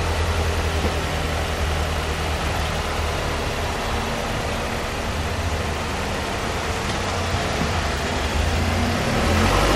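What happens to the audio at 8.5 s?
At 8.53 s, compressed frames are skipped. About a fifth of a second of audio goes missing, roughly seven 26 ms frames. The audio jumps ahead by that amount.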